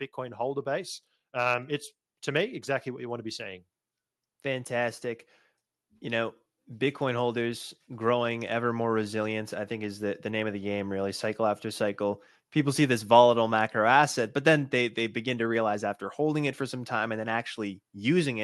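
From 0.15 to 1.77 s, just before "to me exactly", automatic gain rising lifts the level by about 5 dB. It climbs again from 2.96 to 4.77 s, right after "to me exactly", by about 4 dB, and once more, slowly, from 5.99 to 11.93 s, by about 4 dB. Each time the gain control judged the input too quiet and ramped up. A talker leaning closer would raise only the voice, but here the room noise swells along with it.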